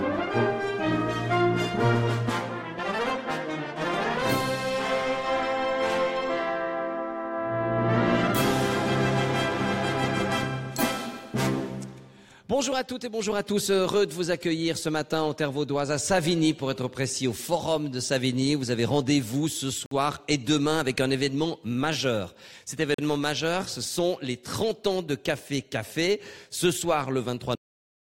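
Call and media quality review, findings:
Bluetooth stall, 19.86 to 19.91 s: audio drops to silence for 53 ms, then resumes. Likely wireless interference delaying packets, headphone buffer running dry, playback holding until retransmitted packets land.

Bluetooth stall, 22.94 to 22.99 s: same symptom, 42 ms gap, then resumes. Same mechanism likely: a late-packet underrun in the Bluetooth link.

Cut-off end, 27.55 s: audio halts mid-sound, straight to digital silence for the last 0.45 s, with no natural decay. Final buffers were never written or played out, so the tail was truncated rather than faded.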